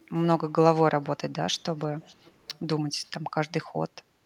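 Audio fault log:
0.17–0.24 s, 1.54–1.58 s, 2.0–2.6 s and 3.06–3.1 s, echo leak: a faint copy of the speech returns 480 ms late, roughly 30 to 40 dB down, strongest across 2.0–2.6 s. This is likely far-end loudspeaker pickup that the echo canceller failed to remove.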